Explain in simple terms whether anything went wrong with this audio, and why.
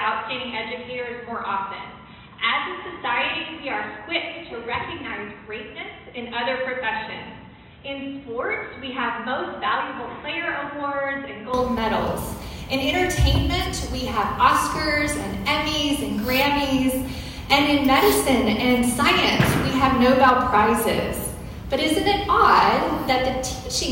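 Input switched to a poorer device, 0 to 11.5 s: the sound is dull, quieter and cut off above 4 kHz, likely from a narrower-band microphone.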